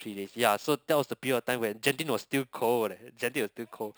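Throughout the speech there is imaging from sample-and-hold upsampling: samples were repeated without smoothing, which fits a 12 kHz source raised to 44.1 kHz. A metallic fizz sits about 16 dB down across 6 to 12 kHz. Unlike steady hiss, it rises and falls with the voice and moves opposite to its pitch.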